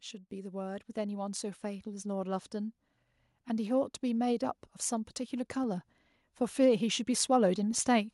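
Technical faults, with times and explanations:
0.28 to 2.81 s, automatic gain rising: the AGC decided the input was too quiet and slowly wound its gain up by about 5 dB over roughly two and a half seconds, so the speech and the room noise behind it swell together rather than the talker getting louder.
5.63 s and 7.78 s, DC step: at each point the waveform's zero line suddenly jumps to a new offset, heard as a short low thump under the speech, which carries on unchanged. A high-pass around 5 Hz in the chain then bleeds the offset away within a few tens of milliseconds.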